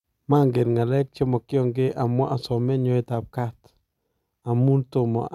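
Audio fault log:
Nothing stood out on listening to this speech recording.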